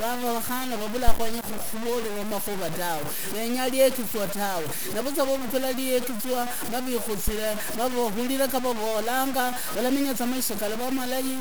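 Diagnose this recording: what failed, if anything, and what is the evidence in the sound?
Low bit depth without dither runs through the whole speech clip, most likely introduced at a sample-format conversion stage. Every syllable carries a grainy, buzzing distortion that tracks the level and shape of the sound, and quieter passages turn gritty rather than fading smoothly. The error sits only about 10 dB below the signal, which fits truncation to around 5 bits with no dither. Because the rounding error follows the waveform, it is heard as distortion rather than steady hiss.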